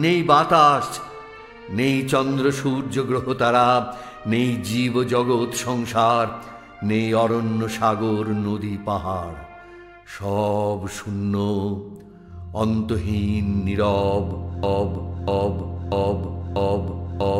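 A broken-record loop begins at 14.63 s and runs to the end: a 0.64 s fragment repeats exactly, back to back, four times. The player or stream likely stalled and kept resending its last buffered piece, so the audio that should have followed is lost.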